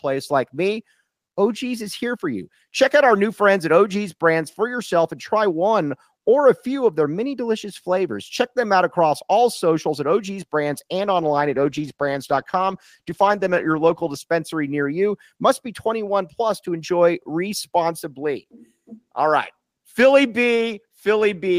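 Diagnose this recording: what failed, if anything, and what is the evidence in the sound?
A call bitrate drop occurred at the codec stage: the call's bandwidth estimate fell and the encoder was told to spend far fewer bits on the speech. From 10.97 s to 14.27 s the speech is coded more coarsely, which fits a drop from about 32 kbps to about 14 kbps held for roughly 3 s. With fewer bits, Opus keeps less detail and trims the top of the spectrum. Once the bitrate recovers, clarity returns well before the clip ends.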